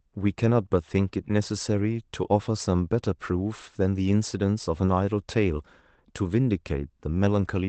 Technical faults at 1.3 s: none

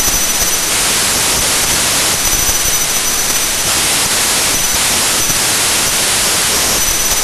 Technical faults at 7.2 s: wrong sample width

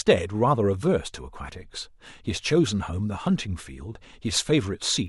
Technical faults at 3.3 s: word clock ticks

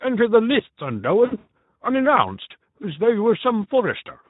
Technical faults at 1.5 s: Speex codec; VoIP packet loss concealed by the speech codec

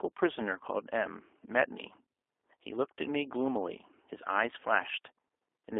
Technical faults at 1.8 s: G.729 codec

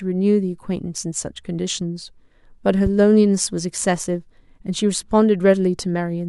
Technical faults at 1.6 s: none

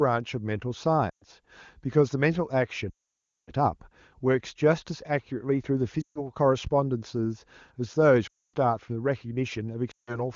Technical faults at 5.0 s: none

